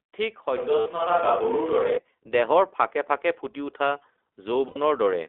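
Speech coded through the iLBC codec throughout: the sound is confined to roughly 0.3 to 3.5 kHz with nothing above, and carries a plainly audible rough, slightly synthetic grain. That grain separates it from a plain telephone band-limit, where the band would be narrow but the voice would stay smooth. The character fits iLBC's 15.2 kbps mode working in 20 ms frames, each coded independently. Lost iLBC frames cause two brief glitches, at 0.80 to 0.88 s (60 ms) and 4.68 to 4.78 s (80 ms), durations that point to three and four lost 20 ms frames. In each, the decoder fills the gap by repeating the last pitch cycle mixed with noise, so instead of a silent hole or a click the listener hears a held, faintly buzzy, breathy vowel. Unlike concealment in codecs that depend on previous frames, the voice snaps back to normal the moment real frames resume, with no smeared recovery afterwards. At 1.02 s the microphone volume is stepped up by about 5 dB in one instant jump, most likely the call software raising the device's input level after judging it too quiet. 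Voice and background noise rise together and stay raised. That sets it apart from an automatic gain control ramp, which would swell gradually, and from a louder passage of speech, where the noise floor would not move.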